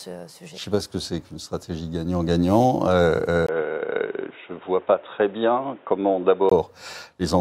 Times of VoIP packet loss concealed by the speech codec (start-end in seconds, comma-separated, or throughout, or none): none